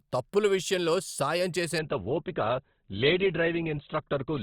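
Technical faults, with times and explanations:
1.79–4.42 s, adaptive stream at a lower bitrate: everything above 4.2 kHz suddenly vanishes without any gap, because the player switched to a lower-quality stream, which fits Opus at about 12 kbit/s.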